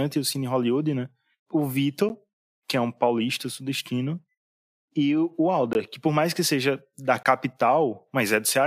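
At 2.09 s, just before "que é um paulista", the speech drops into a block of digital silence, about 10 ms of zeros. It happens again from 5.73 to 5.75 s after "e o" and from 7.23 to 7.25 s after "mais que seja da". The first, under 15 ms, comes across as a tick rather than silence, and the hard cuts point to the output buffer not being filled in time.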